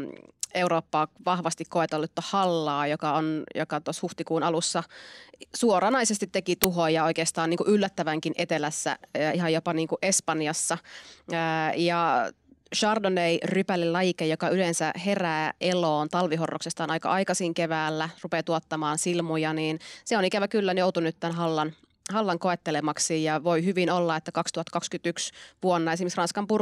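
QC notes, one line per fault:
6.64 s, file tags played as audio: embedded cover-picture data decoded as samples, giving a hard-edged, very loud white-noise click of static lasting only milliseconds.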